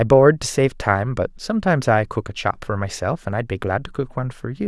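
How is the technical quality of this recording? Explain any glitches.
Nothing glitchy turns up here; I listened for technical trouble and didn't hear any.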